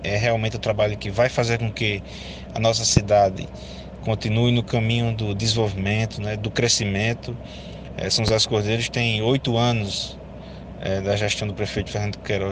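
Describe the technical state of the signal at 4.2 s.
Nothing is wrong with the signal at 4.2 s; the audio is intact at that point.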